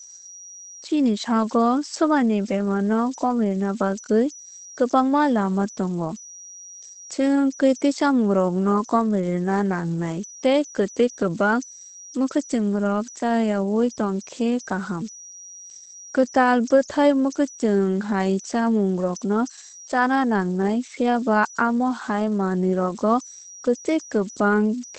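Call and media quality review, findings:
Converter idle tones throughout. Whistle around 5 kHz in pauses, grainy noise under quiet speech, about 21 dB below signal. Likely undithered delta-sigma converter cycling on small inputs.

Opus voice compression throughout. Speech muffled and hoarse, nothing above 8.4 kHz. Wideband SILK coding, damage plainly audible. Consistent with roughly 12 kbps, 20 ms frames.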